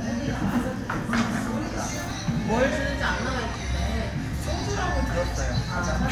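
At 2.11 s and 4.61 s, overlapping chunks produce a short click: each 2.5 s chunk starts 7.07 ms before the last ended, so that sliver of sound plays twice. The waveform shows a duplicated segment with a step at each join, and the spectrogram a thin vertical broadband line.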